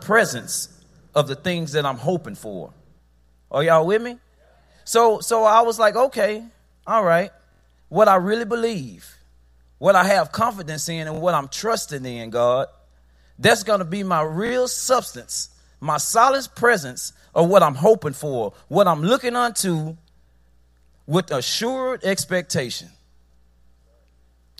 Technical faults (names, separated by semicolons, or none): repeated buffer